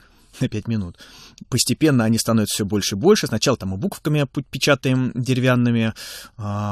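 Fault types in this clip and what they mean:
No faults are present.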